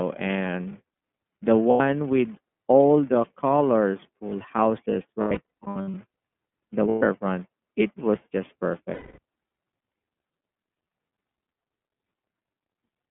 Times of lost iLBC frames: 1.70-1.81, 5.21-5.94, 6.90-7.03, 8.94-9.19

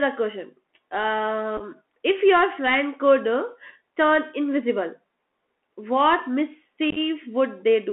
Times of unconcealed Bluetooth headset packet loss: 1.57-1.62, 6.90-6.98

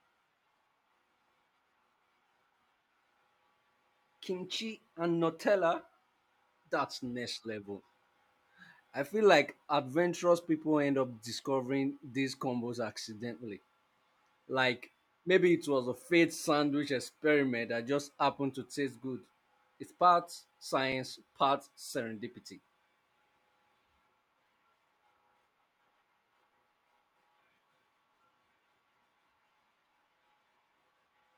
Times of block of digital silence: 20.92

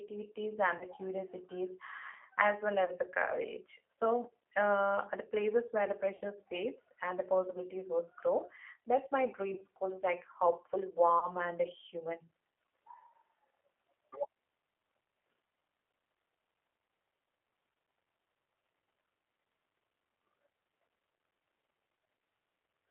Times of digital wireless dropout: none

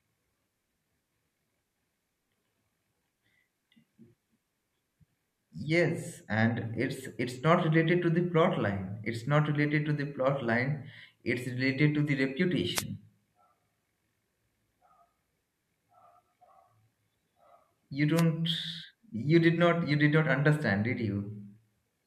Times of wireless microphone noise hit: 12.74-12.84, 18.14-18.23

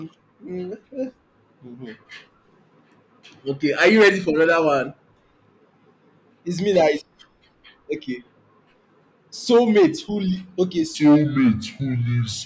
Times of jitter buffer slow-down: none

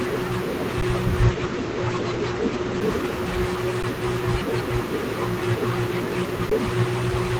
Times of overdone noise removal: none

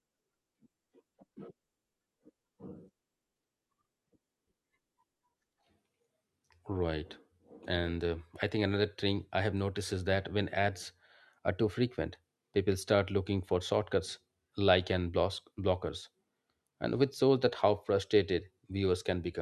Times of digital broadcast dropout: none

